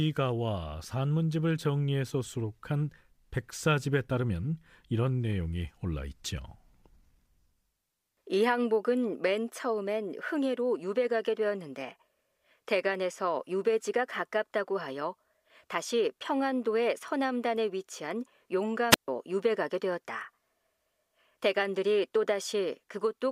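A speech recording with one brief break near the end. At 18.9 s a short burst of hiss swells up, then the sound drops into a hole of near silence lasting about 0.14 s before the speech returns by 19.08 s. This is a wireless microphone squelch dropout: the analogue FM radio link faded, the receiver heard mostly noise, and its squelch circuit muted the output until the signal recovered.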